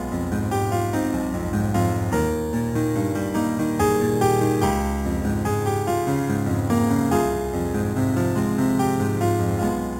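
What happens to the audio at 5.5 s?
Imaging from sample-and-hold upsampling is present at 5.5 s, as it is across the whole clip. The audio was raised from 8 kHz to 48 kHz by repeating each sample with no smoothing filter, so mirror copies of the spectrum appear around multiples of 8 kHz. The lowest copy falls between 4 kHz and 8 kHz, about 20 dB below the signal. It is heard as a bright metallic fizz whose level follows the sound.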